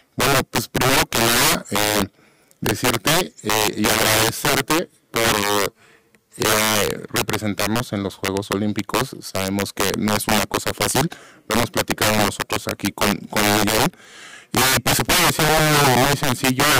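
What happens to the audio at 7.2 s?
At 7.2 s the speech is hit by integer overflow, which runs through the whole clip rather than starting there. The signal is driven about 17 dB too hot, so every peak past the integer limit wraps to the opposite sign instead of being held at full scale, affecting roughly 7 percent of samples. It sounds like violent cracks on loud syllables, harsher than clipping. The waveform shows peaks jumping rail to rail, and the spectrogram shows bright broadband vertical streaks.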